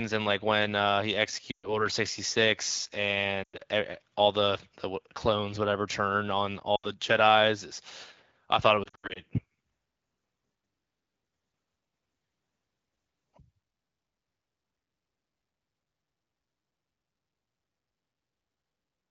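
Lost AMR speech frames: errors corrupted speech frames, so the wideband decoder reused the last good pitch and vocal tract settings at falling gain. At 1.51–1.86 s, 3.43–3.62 s, 6.75–6.91 s and 8.83–9.20 s, speech smears, fades quickly and returns rough. The second and fourth are scattered bursts.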